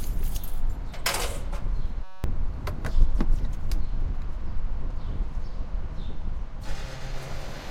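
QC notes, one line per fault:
2.04–2.24 s, system hang loop: the sound freezes into a steady buzz pitched at about 188 Hz, because one 5.33 ms slice repeats exactly, dozens of times, while playback is stalled. This fits a 256-sample buffer being replayed, and roughly a fifth of a second of audio is lost. Unlike mains hum, the buzz starts and stops abruptly with the stall, and unlike a dropout it never goes silent.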